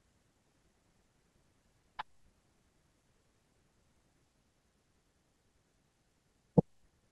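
Nothing stood out as a technical fault on listening to this speech recording.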